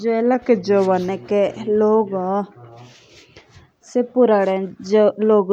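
A drift correction step runs from 0.35 to 1.09 s: the speech suddenly slows by about 5.9 percent and drops roughly a semitone (about 106 cents) in pitch, then snaps back to normal speed and pitch. Speed and pitch move together, so it sounds like a tape briefly dragging. The likely cause is clock-matching software that lowered the playback rate in a single step to rebalance its buffer before restoring it.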